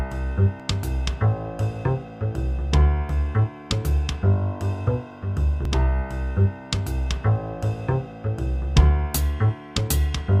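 At 0.6 s, 3.09 s and 5.65 s the sound jumps forward. No gap is heard. The likely cause is a dropped buffer (overrun), where audio was overwritten before capture. Roughly 40 ms went missing first, then about 20 ms twice.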